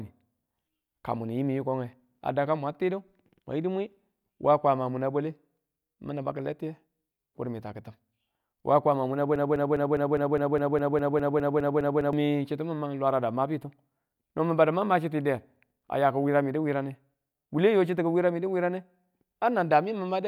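Just after "waa kwama muna", at 9.36 s, the speech locks into a broken-record loop: a 204 ms fragment plays back to back 14 times until 12.13 s, and the speech that belonged in that stretch never arrives. The likely cause is a stalled player, encoder or stream resending its last buffer. On a waveform the same shape tiles across nearly three seconds; a spectrogram shows identical vertical blocks repeating about five times per second.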